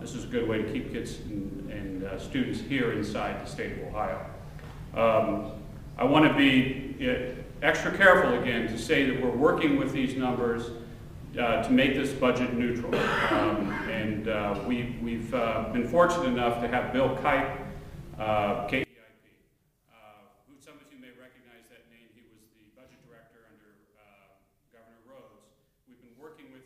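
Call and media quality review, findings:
From 18.84 s to end of clip: sudden drop of about 29 dB, faint residue only. Likely one channel inverted: reversed polarity on one stereo leg, shared content cancelling at mono fold-down. Waveform: amplitude collapses to near-flat trace. Spectrogram: low end and centre energy nearly vanish, leaving weak difference components.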